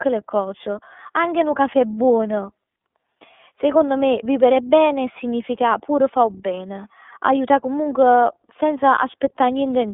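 Throughout the speech, the iLBC codec confines the sound to roughly 250 Hz to 3.6 kHz and codes each frame independently, which fits its 30 ms, 13.33 kbps mode. The result is a plainly rough, slightly synthetic texture with no high-frequency detail.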